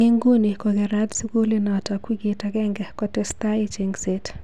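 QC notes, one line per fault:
No faults found on a full listen; the speech needs no fixes.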